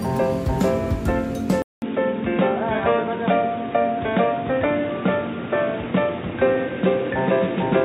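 Input likely switched to a poorer device at 1.62 s: after a 200 ms gap, nothing above 3.8 kHz remains, leaving a boxy tone and faint new noise.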